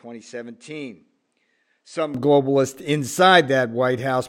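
From 0 to 2.14 s the speech sounds duller and about 10 dB quieter, with nothing above 9.8 kHz and faint added noise, likely from the input being switched to a poorer device.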